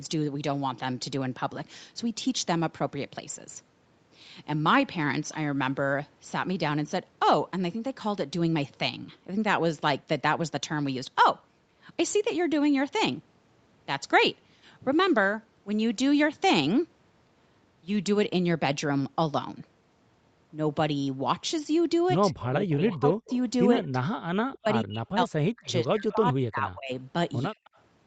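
From 22.31 s the speech is hit by an echo leak, likely a loudspeaker echo slipping past the far side's canceller. It is a faint copy delayed 120 ms, roughly 15 dB under the speech. It recurs at 23.09, 25.65 and 27.64 s, fading to roughly 35 dB down. The added delayed copy marks it as echo, not a dropout.

Overlapping from 22.32 to 23.3 s, then 23.75 to 23.96, 24.43 to 26.92 and 27.49 to 27.56 s, speech is suppressed in double talk, likely the canceller ducking the talker while the other side speaks. The voice sinks by roughly 25 to 40 dB in choppy pieces, rather than stopping cleanly as a dropout would.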